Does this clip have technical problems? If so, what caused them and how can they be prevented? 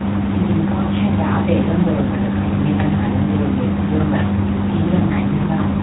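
Yes. The speech suffers from tandem speech coding. It sounds rough, muffled and warbly throughout, with nothing above 3.8 kHz. That points to two low-rate speech coders in series, likely AMR-NB and then G.726 at 24 kbit/s, with a G.711 link between them. Each coder re-encodes the previous one's errors. Prevention: keep one codec end to end, or use transcoder-free operation between networks.

There are also regular clicks, heard about once every 0.98 s from 0.13 s to 5.01 s. The likely cause is clock drift buffer slips. Two devices' clocks differ by several hundred parts per million. The buffer between them periodically drops or repeats a few tens of samples. Prevention: lock both devices to a shared clock, or use adaptive resampling.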